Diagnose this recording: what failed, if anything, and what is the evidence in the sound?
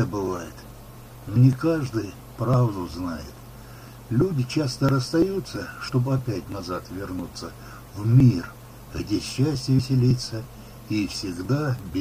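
The failure is in the codec stage: damaged data in a compressed stream. Three brief blips cut through the sound, at 1.35 s, 5.88 s and 9.78 s. Each lasts under 20 ms. The compressed bytes at those points were corrupted. The decoder could not read those frames cleanly. It briefly lost sync and hunted for the next valid frame header. Each failed frame came out as a short glitch before normal decoding resumed.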